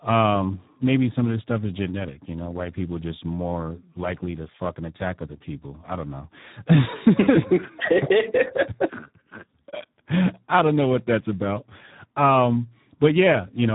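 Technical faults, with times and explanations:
Throughout: Speex codec. The speech has been squeezed through Speex at a low setting, with the bitrate sounding like about 8 kbps, and the damage is heavy. At that rate the CELP coder has very few bits left to describe the excitation, so voiced sound comes out hoarse, buzzy and noisy. Nothing survives above about 3.8 kHz, so the audio sounds dull and narrowband.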